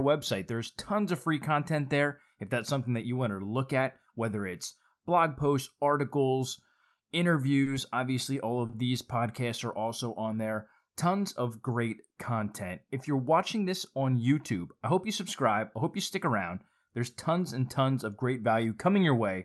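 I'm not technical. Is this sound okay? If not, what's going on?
No. There are two short stalls from a late packet, at 7.63 s, just before "obviously all", and at 8.66 s, between "obviously all" and "these podcasts are also". On this call, a piece of audio arrived late. The receiver had nothing new to play, so it stretched the last sound for about 30 ms and then carried on from the same spot. Nothing is lost. You hear a brief hold, with a slight buzz or dip.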